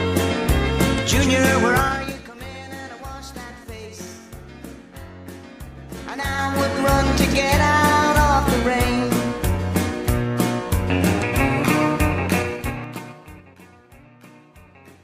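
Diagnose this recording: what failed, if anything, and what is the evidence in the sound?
Zipper noise is the problem, from 12.35 to 13.56 s. The level drops by roughly 25 dB, and you can hear a ticking ride on the sound the whole way down, around seven ticks a second. The gain is being stepped in jumps of about 3 dB with no smoothing, so each jump leaves a little click. That suggests gain applied per buffer in the driver or processing stage.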